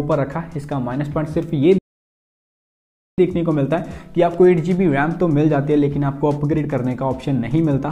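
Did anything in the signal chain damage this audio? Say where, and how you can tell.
Yes, there's a playback stall in the playback stage. The sound cuts out mid-flow at 1.78 s and stays silent until 3.18 s, about 1.4 s, then resumes. The player likely ran dry of data or had its thread blocked, leaving the output silent until it caught up.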